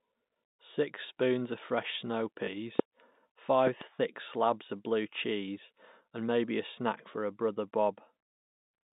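At 2.46 to 2.48 s, packet loss with the last packet repeated leaves a 20 ms gap, consistent with one lost packet, filled by replaying the preceding stretch. Because the copy ignores the pitch cycle, it gives a small blip, a rearranged bit of the sound rather than added energy.

A loud pop follows at 2.79 to 2.82 s, peaking about 20 dB above the signal, and two more come in quick succession between 3.67 and 3.84 s at about 15 dB, likely from a switch, plug or static discharge. Unlike the packet glitch, these are sharp thumps laid over the telephone-band audio, which carries on uninterrupted beneath them.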